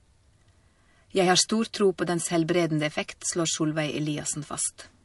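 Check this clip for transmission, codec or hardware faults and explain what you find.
One codec fault runs through the whole clip. It sounds like MP3 compression, likely from a low bitrate near 48 kbps. Nothing remains above 11.3 kHz, where the encoder cut the treble. Weak frequency lines flicker between frames. The speech sounds plainly watery and swirly.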